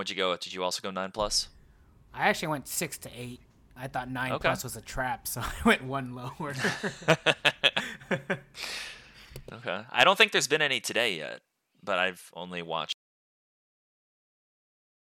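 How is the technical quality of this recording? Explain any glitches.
The recording has one clear glitch: an audio dropout to silence at the end. From 12.93 s, right after "yet but I've only", the speech cuts off abruptly and the last 2.1 s are silence. That is likely lost input while recording continued. Unlike a natural pause, no room tone remains.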